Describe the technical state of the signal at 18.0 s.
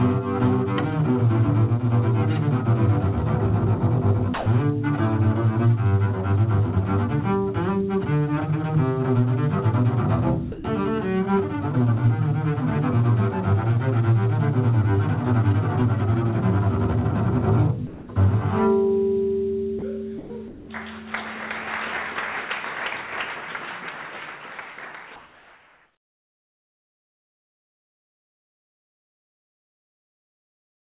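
At 18.0 s the sender's voice detector likely mistook the incoming sound for background and stopped transmitting, so the receiver filled in comfort noise. This sound dropped by the voice detector runs from 17.87 to 18.08 s, where the audio gives way to steady noise until the signal returns.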